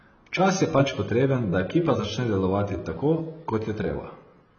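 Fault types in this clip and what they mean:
AAC compression: The speech carries heavy codec damage throughout, with nothing above 6.5 kHz and a dull, smeared sound that warbles and fizzes on sustained sounds and sibilants. The likely cause is AAC-LC coding starved of bits, which fits a bitrate around 16 kbps, so the encoder drops its cut-off and thins out bands. A plain low-pass filter would only remove the highs, while here the remaining band itself swirls and smears.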